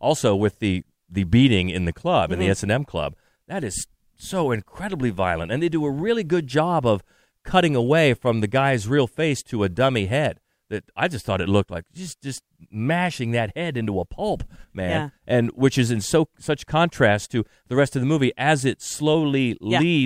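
Nothing technical goes wrong in this speech recording at any point, so there's really nothing here to flag.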